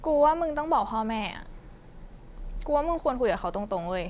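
No technical faults can be heard anywhere in the recording. The speech carries no audible interruptions, distortion or dropouts.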